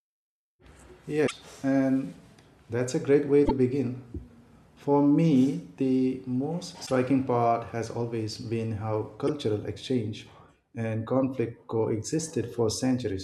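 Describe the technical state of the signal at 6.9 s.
Right around there you get damaged data in the compressed stream, from about 6.83 to 6.91 s. A short run of corrupted frames makes the decoder misread them and lose sync until it finds the next valid frame header, so the speech breaks into a brief glitch.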